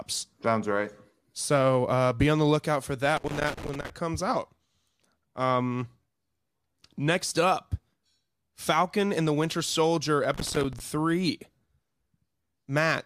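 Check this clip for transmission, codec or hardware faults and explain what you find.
Two bursts of loose connector crackle interrupt the speech, from 3.17 to 3.90 s and from 10.34 to 10.80 s. A worn or dirty contact is making and breaking intermittently, chopping the signal into irregular scratchy crackle.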